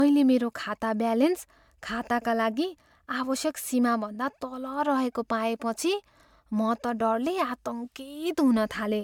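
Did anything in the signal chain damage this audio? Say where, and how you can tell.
Yes. Throughout the speech there is a swirly, hollow smear and softened consonant attacks, worse than a bandwidth reaching 20 kHz would suggest. This is likely generation loss at the codec stage: repeated MP3 encoding, around five passes near 135 kbit/s, compounding quantisation noise and spectral holes.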